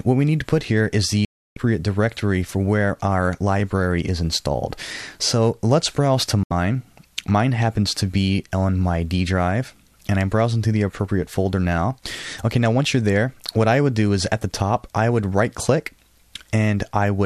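At 1.25 s the sound snaps to silence for about 0.32 s, and again at 6.43 s for 0.08 s: a digital broadcast dropout, receiver muting lost frames with a 3 ms fade.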